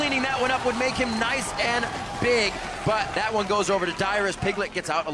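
No technical faults can be heard in this audio. Listening through the whole clip turns up nothing to report at any point.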